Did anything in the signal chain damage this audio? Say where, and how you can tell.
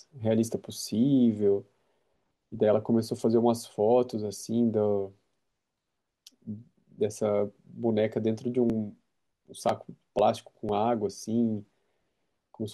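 Yes, at the driver or buffer stage. From 8.70 to 12.19 s there are about seven periodic USB or driver dropouts, ticks every 0.5 s where a couple of milliseconds are skipped rather than silenced. The strict spacing points to a blocking background task, unlike irregular network packet loss.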